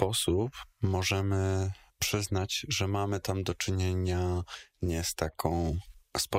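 At 4.44 s, right after "mamy tam do czynienia" and before "nie z", a brief burst of DAB burbling breaks through. Weak reception let bit errors slip past error correction into the MP2 data, so corrupted samples put short blips of noise into single sub-bands, which points to a handful of frames and an error rate of a fraction of a percent. Unlike a packet-loss dropout, the sound isn't muted; it is garbled with short blips of noise.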